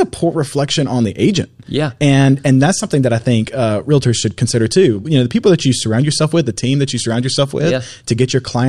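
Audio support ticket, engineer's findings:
No faults found on listening; speech path checked, nothing to report for this ticket.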